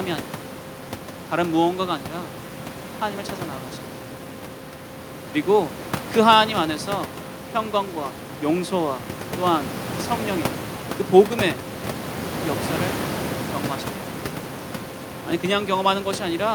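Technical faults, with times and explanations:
Nothing technical goes wrong anywhere in the recording, and the background noise of the room, sitting about 11 dB under the speech, is just part of where the microphone was.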